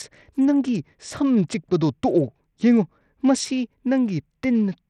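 From the first moment to the end, the speech carries plainly audible coding damage, likely from Bluetooth SBC compression. The upper treble thins out and flickers while a gritty, rasping noise clings to the sound, which fits a starved bit pool near 80 kbps. With so few bits, the codec gives the weakest top sub-bands little or nothing and coarsely quantises the rest. On a spectrogram, high-frequency energy appears as broken, blocky patches that blink on and off, with scattered aliasing smear between them.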